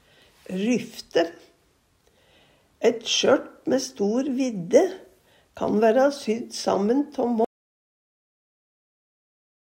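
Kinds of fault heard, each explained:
Audio dropout to silence: at 7.45 s the sound cuts off abruptly and the remaining 2.3 s to the end is silence with no room tone. This likely comes from a lost input while the recorder kept writing zeros.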